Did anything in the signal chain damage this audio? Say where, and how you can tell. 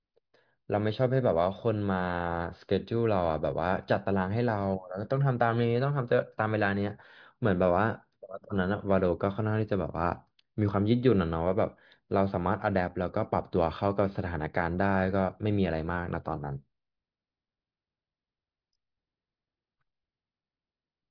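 No, nothing in the signal chain damaged this audio.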